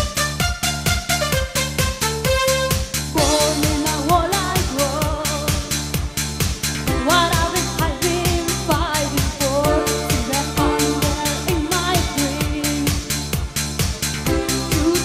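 Nothing technically wrong turns up anywhere in this audio, so there's no fault to pin to a time or trace back to a cause.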